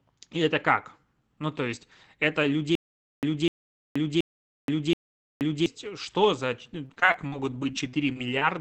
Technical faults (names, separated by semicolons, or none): stutter with silent gaps; repeated packet loss (robotic sound)